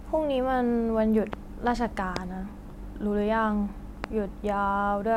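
Three sharp loud pops punch through this speech recording at 1.33–1.35 s, 2.16–2.19 s and 4.04–4.06 s, each about 15 dB above the speech, which continues underneath. The likely cause is brief voltage spikes from a switch, connector or static discharge.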